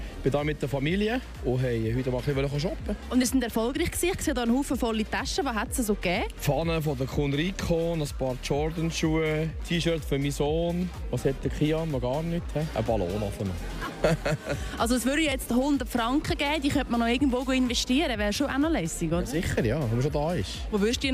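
Two jumps, at 3.23 s and 15.32 s, where the sound skips ahead by a few milliseconds, likely a dropped buffer (overrun) each time.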